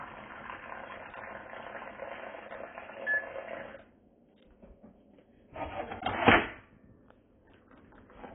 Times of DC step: none

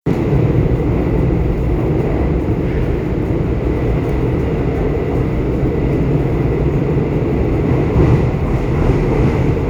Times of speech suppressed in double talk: none

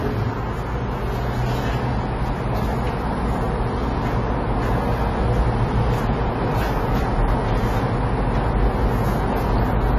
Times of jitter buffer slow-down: none

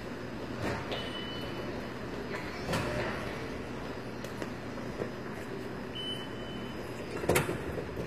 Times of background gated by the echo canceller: none

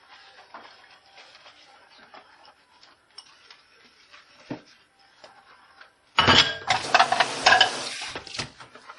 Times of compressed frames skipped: none

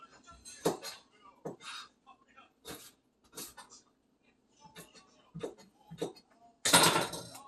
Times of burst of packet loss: none

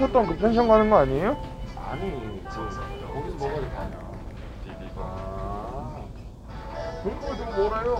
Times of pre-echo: none

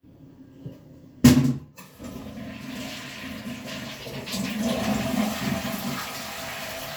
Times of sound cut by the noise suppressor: none

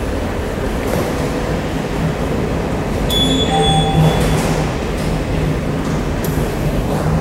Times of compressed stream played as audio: none

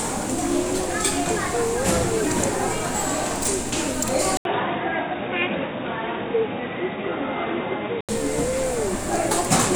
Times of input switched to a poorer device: 4.37-8.09

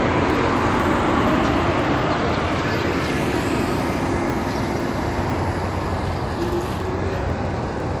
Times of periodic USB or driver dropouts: 0.30-7.80

